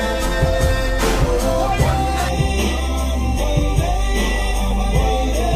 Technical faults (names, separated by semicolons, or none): channel delay (comb filtering)